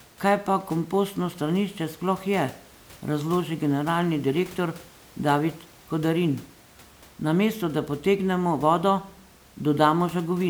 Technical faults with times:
none

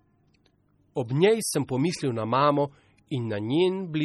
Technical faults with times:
0.00-4.04 MP3 compression

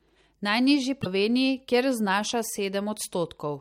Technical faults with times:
1.01-1.06 broken MP3 bit reservoir

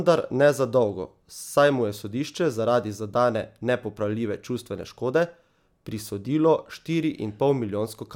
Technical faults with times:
none

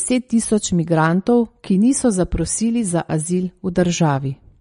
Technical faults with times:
0.00-4.60 MP3 compression

